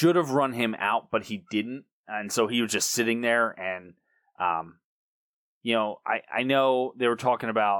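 Speech recording with no audible technical faults.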